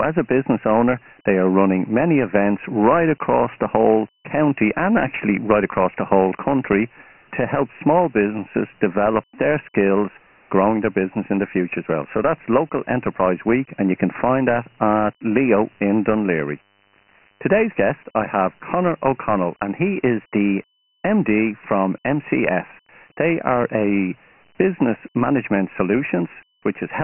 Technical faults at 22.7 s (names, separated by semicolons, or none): Dialogic VOX ADPCM